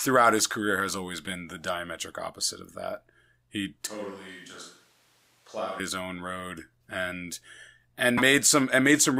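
A speech recording with two faults. From 3.87 to 5.80 s, right after "opposite of that he", the sound turns hollow and roomy, loses low end, drops roughly 5 dB and picks up room noise only about 25 dB below the speech, before returning at "his own road and". This is likely a switch to a distant microphone, with a farther pickup standing in for the close one. At 8.17 to 8.22 s, following "own road and and", a corrupt frame decoded produces a brief burst peaking around -15 dBFS and lasting about one codec frame. Damaged bits made the decoder place energy at the wrong frequencies for that frame.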